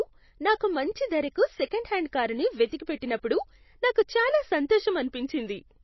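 Speech, with MP3 compression damage running through the whole clip and plainly audible. Nothing is present above about 5.8 kHz, so the treble is cut off and sibilants sound dull, while the remaining sound has a watery, swirling quality as weak frequency components drop in and out between frames. The heavy band limit suggests a very low bitrate, likely around 24 kbps. On a spectrogram this would appear as a hard ceiling near 5.8 kHz with patchy, flickering holes below it.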